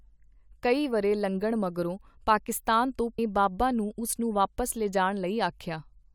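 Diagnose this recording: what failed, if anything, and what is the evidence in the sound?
At 3.18 s, just after "ਲੰਘਣ ਮਗਰੋਂ ਪਾਕਿਸਤਾਨ ਤੋਂ", the speech jumps abruptly ahead with a brief blip at the join. The phrase does not continue naturally. A stretch of the talk is missing, and the sound resumes mid-flow. The stage is network delivery to playback. The likely cause is a stream segment skipped: one chunk of the segmented stream failed to arrive, and the player moved straight on to the next one.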